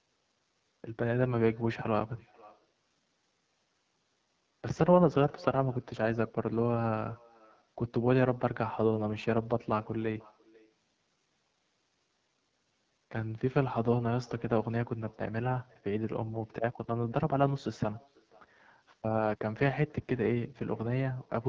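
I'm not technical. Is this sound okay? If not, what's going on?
No, not quite. Two things are going on, and both last the whole clip.

First, there's echo with no canceller. The person on the other end seems to have the call on a loudspeaker, and their microphone is picking up your voice and sending it straight back. Nothing on their side strips it out. So everything said gets a faint, thinner copy trailing about half a second behind. It's quiet, but you can hear it shadowing the speech.

Second, the speech is going through the AMR wideband (HD Voice) codec, the compression used on many mobile calls, set to one of its lowest-quality settings. At that setting it squeezes the voice hard, so the speech comes out plainly rough and raspy instead of clean. The gritty edge on every sound is that compression at work. The very top of the sound is also cut off, which is normal for the phone's own microphone processing and not part of the problem.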